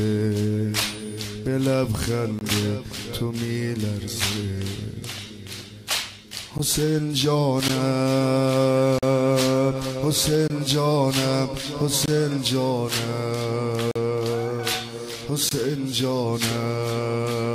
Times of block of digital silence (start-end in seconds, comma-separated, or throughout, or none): 2.39-2.41, 6.58, 7.68, 8.98-9.03, 10.48-10.50, 12.06-12.08, 13.91-13.96, 15.49-15.51